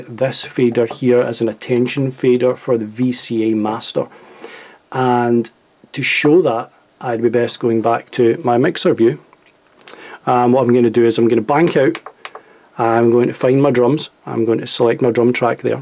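Nothing in this recording stood out as a technical problem on listening.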